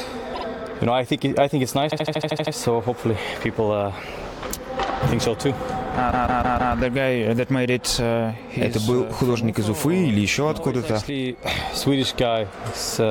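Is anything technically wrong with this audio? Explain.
Yes: repeated frames. A short block of compressed audio was delivered more than once, so it replays as a stutter: a 52 ms block twice at 0.33 s, a 78 ms block eight times at 1.90 s, and a 157 ms block four times at 6.10 s, adding about 1.4 s in total.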